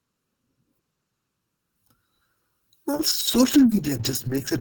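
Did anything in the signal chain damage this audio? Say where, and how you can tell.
Yes. Throughout the clip, the mono sum sounds hollow, with fixed, evenly spaced notches starting around 700 Hz. This is channel delay (comb filtering): one channel lags by under a millisecond.

From 2.94 s to the end, the call bitrate drop makes the codec sound rough and muffled. This fits a fall from 32 to 10 kbps, with continuous coarse sound rather than packet-loss gaps.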